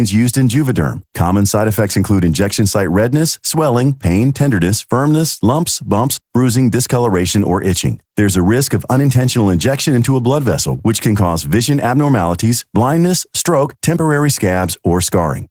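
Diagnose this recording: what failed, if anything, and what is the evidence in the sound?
The codec stage is where it went wrong. The whole speech clip carries Opus voice compression, and it's plainly audible from start to finish. The voice sounds hoarse and a bit robotic, with the rough, grainy texture of an excitation signal coded with too few bits. Top end is still present. That fits hybrid operation, with SILK handling the lower band and a thin CELT layer above 8 kHz, probably at around 16 kbps in 20 ms frames.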